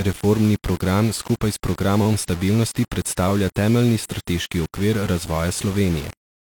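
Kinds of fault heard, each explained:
Low bit depth without dither: throughout the speech, an error that follows the signal sits roughly 20 dB below it. This fits the audio likely having been rounded to 5 bits with no dither, leaving coarse steps instead of smooth level changes.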